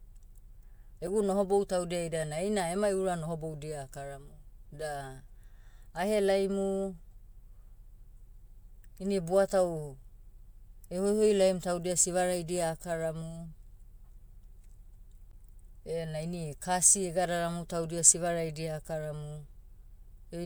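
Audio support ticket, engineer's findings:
Damaged data in a compressed stream, two events in the speech. 1.07 s: very brief blip. Corrupt bytes in the coded data; decoder misreads it, loses sync, resyncs on the next frame header. 15.31 to 15.34 s: short glitch, just before "ena ini kasi egadaramu". Same mechanism, longer. Bad frame data, decoder hunting for a valid header. Probable component: the compressed file or its transport, not playback.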